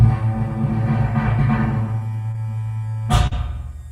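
At 2.31 to 2.38 s and 3.27 to 3.33 s the audio briefly smears into a wobble: short concealed packet loss. About 20 ms and 40 ms never arrived, and the receiver bridged each gap by extending the preceding sound, stretching the first by roughly 10 ms.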